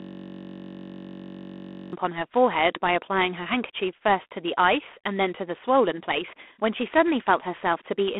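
A speech clip that opens with a steady buzz rather than speech: from the very start until 1.93 s, one 21.33 ms fragment of audio repeats exactly, about ninety times, so the ear hears a tone at 46.9 Hz. This is a system hang loop. The computer or its audio driver stalled while the sound hardware kept replaying the same ring buffer, and a loop this short fits a 512-sample buffer. Throughout the clip, the speech carries a harsh, rasping hiss that rises and falls with its loudness. The sound is held to a telephone band of roughly 250 Hz to 3.4 kHz, with nothing above 3.8 kHz. This is G.726 ADPCM damage. The codec sends only a few bits per sample describing the error of an adaptive prediction, and the coarseness here fits G.726 at 24 kbit/s, below the usual 32 kbit/s rate, so the quantisation noise rides on top of the speech itself.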